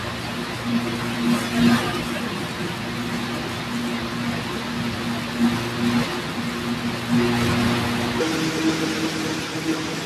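From 8.21 s to the end of the speech at 10.05 s, a section plays at the wrong speed: it runs about 1.35 times too fast, so the voice turns hurried and rises roughly five semitones. The likely cause is playback on a mismatched clock. What separates this from a pitch shift or a time-stretch is that tempo and pitch jump together at the same instant, rather than one changing while the other holds.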